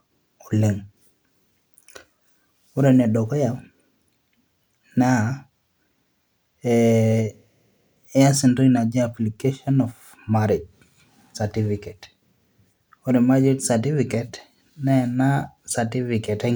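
No faults are audible anywhere in the speech recording; the signal runs without dropouts, glitches, distortion or level anomalies.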